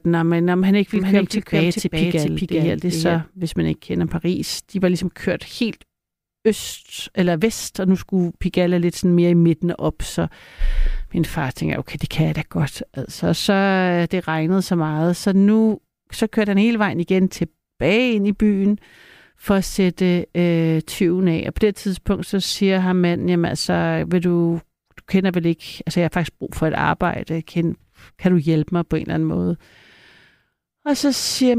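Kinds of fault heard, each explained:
Doubled audio track: a second, full-band copy of the speech runs roughly 400 ms behind, a few decibels quieter, from about 0.96 to 3.18 s, likely from a slower capture path. Unlike echo or reverb, it has no decay or room colour and cuts in and out abruptly.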